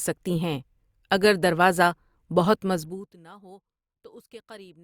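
From 2.73 to 3.17 s the speech is pulled down by around 25 dB in 1 dB jumps, and each jump leaves a tiny click. The result is zipper noise, a fast ticking at about fifty steps per second riding on the voice while the level falls. A smooth fade glides with no texture. Here the gain was clearly applied in unsmoothed increments rather than ramped continuously.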